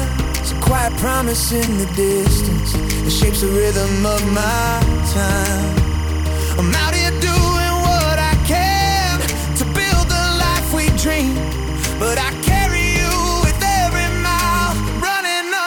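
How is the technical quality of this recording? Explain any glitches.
The recording has one real problem, and it runs the whole way through. There's timecode bleed: linear timecode from a neighbouring track or cable has leaked in, and its square wave flips between roughly 1 and 2 kHz at a 25-frame rate. You hear it as a steady chirpy warble sitting about 15 dB under the main sound.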